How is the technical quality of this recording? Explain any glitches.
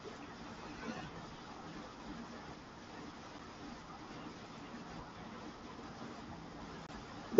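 The recording has two brief dropouts from unconcealed Bluetooth headset packet loss. The first is at 3.39 s, a hole of about 7.5 ms, the length of a single headset frame. The second runs from 6.87 to 6.89 s, about 22.5 ms, which fits three consecutive frames. No concealment filled either gap, so silence replaces the sound. Each hole has hard edges that can click or tick. The wideband mSBC headset link carrying the audio adds only light graininess on louder passages.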